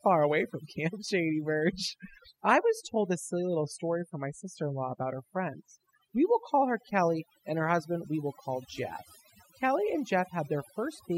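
Overdone noise removal runs through the whole of this speech clip. A noise reduction stage was pushed too hard on a noisy source, so individual frequency bands that come close to its noise estimate get pulled far down or shut off entirely, and softer parts of the voice are stripped out along with the noise. Between phrases the background drops to near silence speckled with twinkling artefacts.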